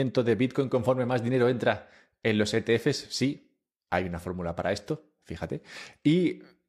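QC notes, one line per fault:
No faults heard.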